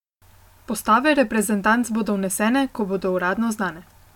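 No faults can be heard anywhere in this speech recording. No dropouts, clicks, distortion or other breaks in the signal show up at any point.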